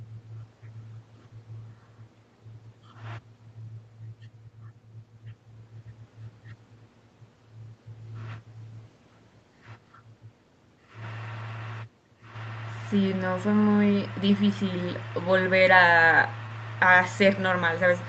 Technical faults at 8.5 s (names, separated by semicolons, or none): none